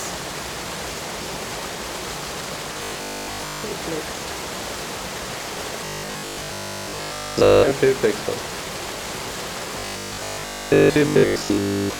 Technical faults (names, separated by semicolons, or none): robotic sound from repeated short buffers